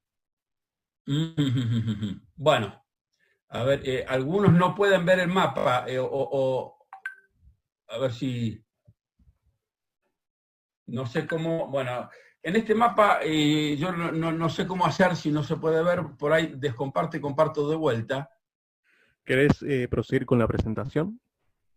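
Bursts of packet loss at 1.23–1.39 s and 11.52–11.60 s drop about 140 ms and 60 ms; the receiver stretches the last sound into a fading buzz or hiss before audio resumes further on. Repeated buffers at 3.58 s, 5.58–5.66 s and 13.72 s replay a 20 ms chunk, once, four times, then once, giving hard-edged stutters. Short concealed packet loss at 6.17–6.20 s, 14.96–15.00 s and 20.86–20.90 s loses about 20 ms each, which is patched over as a brief smear or wobble.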